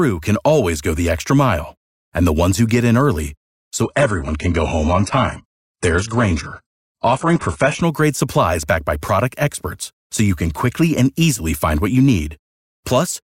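From 3.82 to 7.82 s, after "who get in early", the adaptive stream switches to a lower bitrate, abruptly cutting everything above 11 kHz without a gap.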